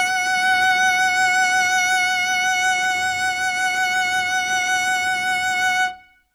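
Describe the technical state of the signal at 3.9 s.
At 3.9 s the music comes through intact, with no audible dropout, distortion or other fault at that point.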